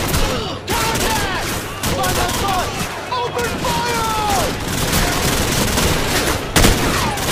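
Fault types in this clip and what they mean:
Nothing stood out on listening to this audio.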